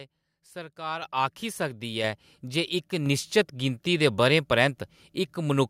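Speech, with the microphone volume stepped up three times: at 1.02 s by about 9 dB, at 2.04 s by about 4 dB just before "ऐ जे इक निश्चत", and at 3.06 s by about 3 dB between "ऐ जे इक" and "निश्चत गिनती दे". The call software judged the input too quiet and raised the device level in one jump each time. Unlike compressor pumping or a smooth gain ramp, voice and background leap together instantly and stay at the new level.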